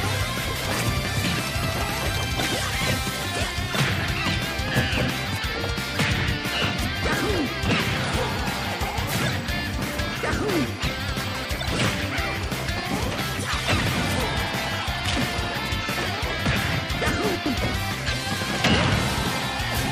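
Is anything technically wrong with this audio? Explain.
Yes, there are frames out of order in three spots: 0.45 to 0.66 s, 11.24 to 11.45 s, and 17.35 to 17.56 s. Each time, two neighbouring blocks of about 104.5 ms got swapped and decoded in that order, which fits runs of four frames each. So a fifth of a second plays with its halves flipped, giving a garbled flutter. Nothing is actually lost, it's just rearranged.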